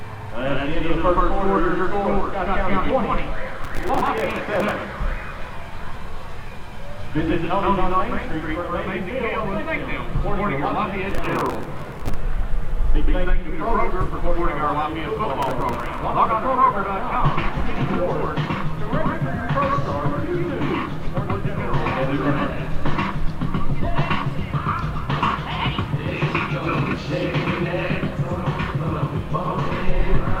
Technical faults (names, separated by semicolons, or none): processor overload crackle